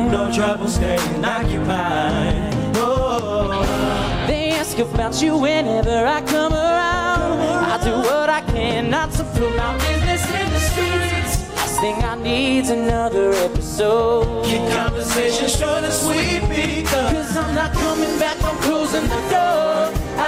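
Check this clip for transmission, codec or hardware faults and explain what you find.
One fault runs through the whole clip: mild hard clipping. Only the loudest peaks crackle, a tiny fraction of the audio, because the signal drives about 1 dB past what a stage can pass, so those peaks are cut flat and spray high harmonics.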